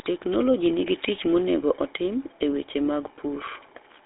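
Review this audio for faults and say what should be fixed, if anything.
A buzzy, gravelly roughness sits on the speech for the whole clip, with nothing above 3.8 kHz and a narrow 300 Hz to 3.7 kHz phone band. That is GSM full-rate codec damage, fitting a 13 kbit/s path, where the voice is rebuilt from a vocal-tract model driven by sparse, regularly spaced excitation pulses. To prevent it, capture or route the speech over a wideband path instead of a GSM full-rate call leg.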